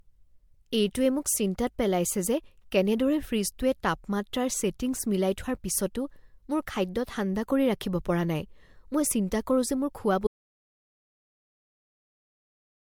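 Generation loss runs through the whole of this speech recording: it sounds swirly, smeared and hollow, with blurred consonant attacks and nothing above 19.9 kHz, most likely from about three rounds of MP3 encoding at 96 kbit/s, each pass re-quantising on a shifted frame grid so the noise and spectral holes pile up. An audio dropout to silence starts at 10.27 s, just after "যে মোৰ", and lasts to the end with no room tone, likely a lost input while the recorder kept writing silence.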